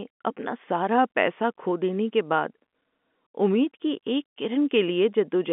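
Nothing here goes wrong at any point; the speech simply carries the narrow, boxy quality of an ordinary telephone line, with the top end stopping around 3.5 kHz, the way G.711 telephone coding normally sounds.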